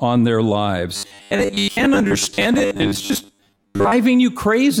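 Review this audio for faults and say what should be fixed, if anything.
From 0.96 to 3.95 s the speech turns into a rigid, metallic 100 Hz buzz that loosely follows the words. This is robotic sound from repeated short buffers: most of that span is likely a 10 ms chunk replayed while real audio is skipped. Unlike plain dropouts, there are no gaps, only a fixed-pitch drone. Enlarging the playback buffer or fixing upstream delivery, so new audio arrives on time, would prevent it.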